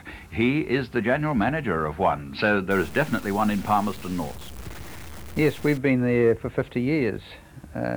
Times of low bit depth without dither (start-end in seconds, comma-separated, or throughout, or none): 2.71-5.77